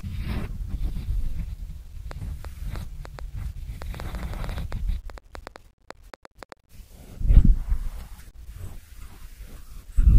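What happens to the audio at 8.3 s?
Nothing goes wrong at 8.3 s: the speech there is intact, with no dropout, click, distortion or other fault.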